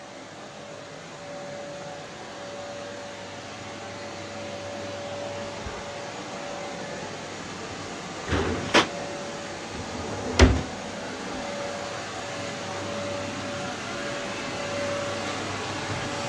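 No technical faults are audible anywhere in this recording.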